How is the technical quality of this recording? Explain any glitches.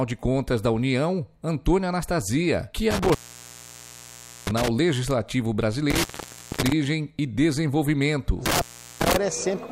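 The recording has a recurring connection problem: intermittent contact in three spots, at 2.91 to 4.68 s, 5.90 to 6.72 s and 8.46 to 9.16 s. A loose plug or cable is briefly losing its connection, so the signal drops out for about 1.33 s, then 0.55 s, then 0.39 s. You hear crackle as the contact scrapes open and shut, and faint hiss fills each gap.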